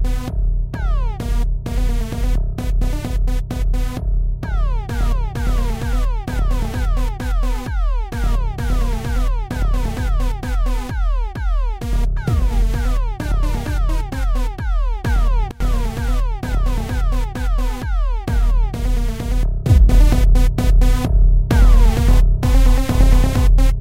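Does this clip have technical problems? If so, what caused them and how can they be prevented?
Yes. There are two sudden gain jumps in this everyday sound recording. At 15.51 s the level drops by about 21 dB and comes back at 15.60 s. From 19.69 s to the end it rises by about 6 dB. The sound and the background noise change level together, which likely means a digital gain setting was applied instantly without a ramp. On a waveform the envelope steps sharply at each edge, and a spectrogram shows every frequency band darkening or brightening at once. To prevent it, apply gain changes through a short fade of a few milliseconds.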